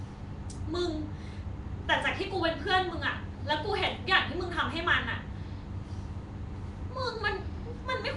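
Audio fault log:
throughout Nellymoser compression: speech has a rough, hissy halo and a smeared, underwater tone with nothing above 10.6 kHz, likely from Nellymoser Asao coding near 44 kbps.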